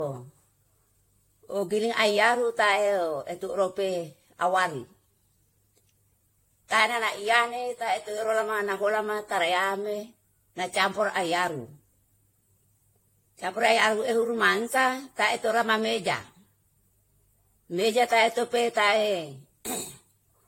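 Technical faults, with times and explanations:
Throughout, generation loss: the speech sounds swirly, hollow and smeared, with soft attacks and nothing above 16.5 kHz. It's likely from about five rounds of decoding and re-encoding, pointing to AAC-LC near 64 kbit/s, each pass adding fresh quantisation noise and spectral holes on a shifted frame grid.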